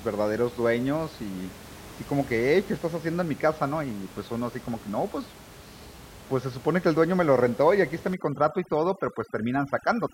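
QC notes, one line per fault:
8.14–10.14 s, overdone noise removal: aggressive noise reduction clamps bands near its noise estimate, leaving twinkling specks between phrases.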